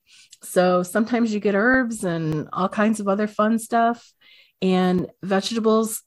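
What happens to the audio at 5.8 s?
Nothing goes wrong at 5.8 s; the speech there plays through intact, with no dropout, click or distortion.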